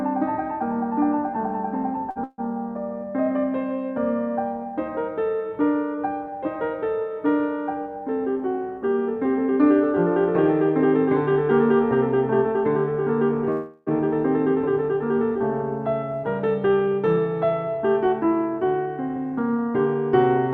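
At 2.11 s a short stall from a late packet holds the music for about 52 ms. The jitter buffer ran dry, so the last sound was stretched, then playback resumed unbroken.

Call audio freezes follow from 2.24 to 2.40 s and from 13.51 to 13.89 s. Held-up packets likely emptied the buffer. The sound continues as a fading buzz, with about 30 ms of silence in the first freeze. Playback then resumes, 143 ms and 356 ms late.

From 16.12 to 20.37 s a jitter buffer speed-up plays the music at 108% speed. Tiny pitch-period slices, about 0.3 s in total, are cut, so the tempo rushes while the pitch holds.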